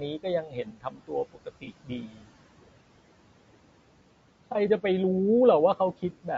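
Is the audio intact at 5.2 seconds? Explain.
No, not at 5.2 s. Noise suppressor artifacts run through the whole clip, so they're there too. The room noise sits about 18 dB under the speech, and the suppressor pulls it down by roughly 18 dB in each band it judges to be steady noise, frame by frame. The noise drops away in the gaps and comes back up under the speech.

The speech itself sounds rough and grainy, with noise filling in between the harmonics and a top end that feels flattened or synthetic. That's plainly audible, and the likely cause is low-delay AAC compression, AAC-ELD, with the damage pointing to a low bitrate around 32 kbps.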